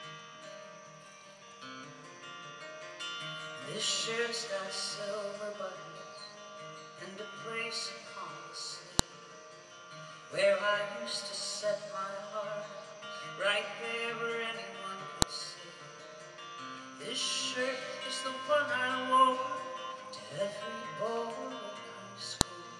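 At 8.99, 15.22 and 22.41 seconds a sharp, loud click marks a file header played as audio: joined pieces kept their headers, whose bytes play as samples. Each shows as a thin spike in the waveform and a vertical broadband line on a spectrogram.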